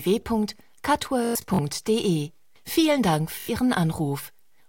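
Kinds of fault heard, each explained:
Bluetooth stutter: the wireless link dropped or delayed audio packets, and the receiver replayed its last short buffer until fresh data arrived. The result is a buzzing, machine-gun repeat. Between 1.25 and 1.59 s about 192 ms goes missing in scattered gaps, the longest run about 107 ms. A briefer burst at 3.40 to 3.49 s loses about 85 ms. On a waveform the repeats look like identical tiled cycles, and a spectrogram shows evenly spaced vertical striping.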